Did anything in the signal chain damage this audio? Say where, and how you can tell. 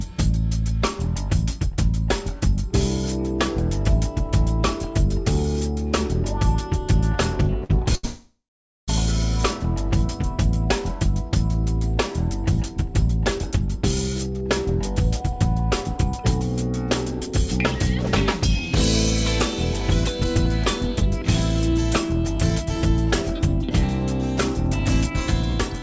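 Yes, the damage is at the network and jitter-buffer stage of a call path. The audio is band-limited with nothing above 8 kHz, which fits a wideband call codec such as G.722.

Two short stalls from late packets occur at the buffer stage, from 7.64 to 7.71 s (53 ms) and from 7.95 to 8.05 s (82 ms). The last sound is held and stretched, then resumes where it stopped. Unlike a dropout, nothing is lost.

A call audio freeze follows from 8.05 to 8.90 s, likely caused by packets held up on the network. The held sound decays into about 450 ms of silence, far longer than a stall, before the audio picks up again with nothing skipped.

A jitter buffer speed-up runs from 13.08 to 18.60 s at 104% and from 19.81 s to the end at 103%. Pitch-period slices are trimmed to shed the built-up delay, roughly a third of a second and a fifth of a second in total. The audio runs slightly faster, but the pitch stays the same, unlike a resampling error.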